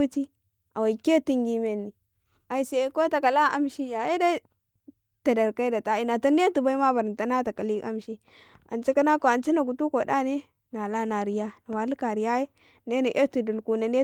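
Nothing stood out on listening to this speech recording.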